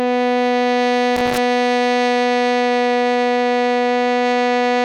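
At 1.16 s the music is broken by loose connector crackle lasting until 1.38 s. That is a burst of about 0.2 s. A worn or dirty contact somewhere in the cable path is shifting. Each time it loses touch, the signal cuts out for an instant. Each time it reconnects, any DC on the line adds a pop. The rapid making and breaking gives an irregular, scratchy crackle laid over the music.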